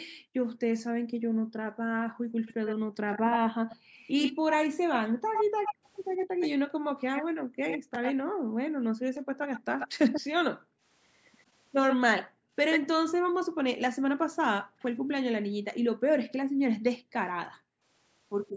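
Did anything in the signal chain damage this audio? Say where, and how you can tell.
Yes. Background gated by the echo canceller, a call-processing fault: the room sound collapses by about 40 dB from 0.07 to 3.95 s, 5.05 to 5.32 s, 6.27 to 9.39 s, 10.49 to 10.83 s and 12.23 to 17.84 s, then returns. While the far-end loudspeaker was active, the canceller's suppressor clamped the microphone path hard. The ambient floor is pumped away with it, so the background drops out instead of staying steady.

Echo leak, also in call processing: a delayed duplicate of the speech sits roughly 5 dB below the direct signal from 2.46 to 8.14 s at about 101 ms, then from 9.15 to 10.21 s and 11.9 to 12.8 s at about 134 ms. The short fixed offset and the shift in delay point to an acoustic path from loudspeaker to microphone. That residual was likely left uncancelled by the echo canceller and sent back into the call.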